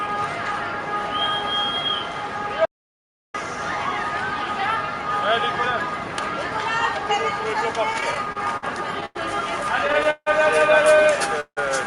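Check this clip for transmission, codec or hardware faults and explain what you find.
The clip carries five faults of four kinds. The sound travels through an Opus call path with its top end limited to 12 kHz.

From 2.65 s to 3.34 s there is an audio dropout to silence. The input was likely lost, perhaps through a disconnected device or a stray mute, while recording carried on writing silence. The sound cuts off abruptly. About 0.69 s of silence follows, with no background noise at all. It then resumes mid-flow. Whatever happened in that gap is gone.

Repeated stalls, a stutter, appear twice. From 7.93 s to 8.64 s there are seven gaps. Together they fill 129 ms, and the longest is 51 ms. That is about 18% of the span. From 9.79 s to 10.28 s there are five gaps filling 193 ms, with one of 159 ms, about 39% of the span. Packets arrived late again and again, and the jitter buffer kept running dry. 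The receiver extended the last sound each time. Nothing is lost, but the audio drags and judders, worse in the second burst.

From 9.06 s to 9.17 s there is a short stall from a late packet. One packet came 95 ms late. The buffer emptied, and the receiver stretched the preceding sound for those 95 ms. It then continued from exactly where it stopped. One moment is held too long, with a faint buzz or dip. Nothing is missing.

From 11.40 s to 11.59 s there is a call audio freeze. Packets were likely held up in transit, emptying the jitter buffer. For 163 ms the receiver continued the last sound as a fading buzz. About 80 ms of that is silence. Playback then picks up where it left off. A gap has been inserted, but no audio is missing.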